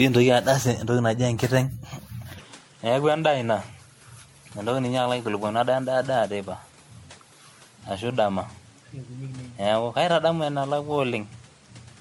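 Right from the start the speech has that swirly, hollow smear of generation loss, likely from being run through MP3 around seven times, which fits a 64 kbit/s chain with nothing above 16.5 kHz. At 2.40 s it turns duller with no gap or level jump, likely an input switched to a poorer device: the band now stops at 11.4 kHz and a new noise floor sits about 30 dB down, through to the end.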